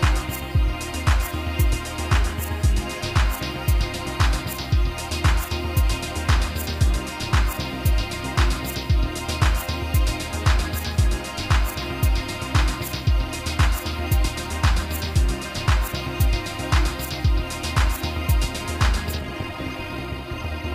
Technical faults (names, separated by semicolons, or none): time-stretched section